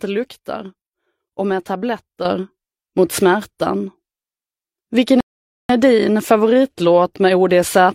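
A sudden gain jump at 2.25 s lifts the whole signal by about 7 dB from one sample to the next, and it stays raised to the end. The background noise rises together with the sound, the likely result of a gain setting or bit shift applied without any ramp.

A rebuffering stall from 5.21 to 5.69 s drops the audio to silence as the player runs out of downloaded data and waits for more. Playback then resumes exactly where it stopped, so nothing is skipped but about 0.49 s is added.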